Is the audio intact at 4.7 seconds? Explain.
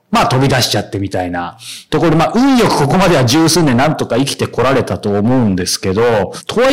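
No, hard clipping runs through the whole speech clip: driven about 18 dB too hot, roughly a third of samples hit the ceiling flat, giving harsh fuzz, not soft saturation's rounded warmth.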